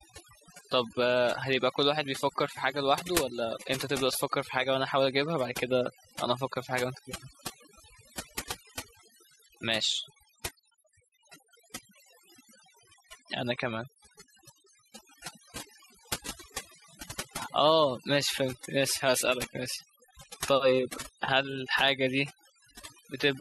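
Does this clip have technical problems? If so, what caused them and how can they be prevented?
Yes. Overdone noise removal throughout: a noise reducer set too strong cuts bands near its noise estimate, leaving twinkling silence and cutting quiet parts of the voice. Prevent it by using gentler reduction settings.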